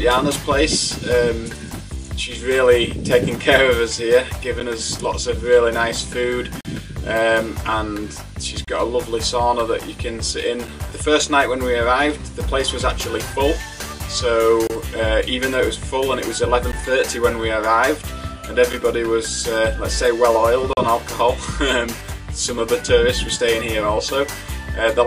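Short silent holes cut the sound at 4.60, 6.61 to 6.65, 8.65 to 8.68, 10.67, 14.67 to 14.70, 16.72, 18.73 and 20.73 to 20.77 s. These are gaps between stream segments, falling about every 2 s. Segment timestamps leave small gaps, from 7 to 42 ms, that the player fills with silence. Each is an abrupt, hard-edged dropout.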